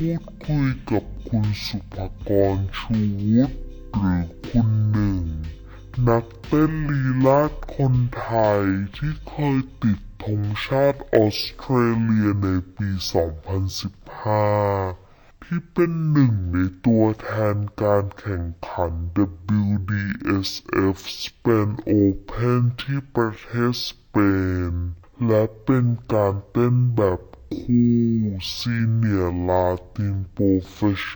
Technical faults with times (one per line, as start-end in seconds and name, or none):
0.00-31.16 stereo read as mono